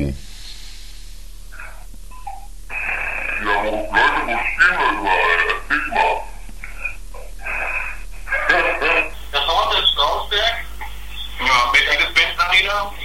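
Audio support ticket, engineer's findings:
Section at the wrong speed, 0.0 to 9.14 s: playback at 0.75x, pitch down about five semitones, slow and deep. Likely a player or editor running on a mismatched clock.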